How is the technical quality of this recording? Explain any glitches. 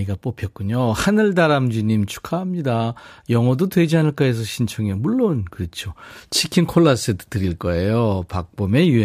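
The recording has one recurring fault, a steady train of faint ticks. Clock slip clicks run from 0.14 s to 8.98 s, around seven per second, about seventy in all. Their likely cause is two devices running on unsynchronised clocks that disagree by roughly 150 parts per million, so each time the drift totals one sample, a single sample is dropped or repeated. The result is a regular ticking laid under the speech, about every 0.15 s.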